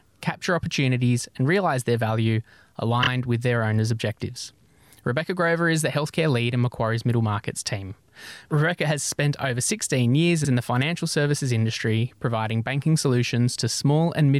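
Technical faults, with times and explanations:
3.02–3.07 s, repeated frames: a 26 ms block plays twice more before "with their owners' objectives", adding 52 ms of stutter.
10.44–10.49 s, repeated frames: a 52 ms stretch, consistent with two compressed frames, replays once before "in the financial services", causing a brief stutter and lengthening the audio.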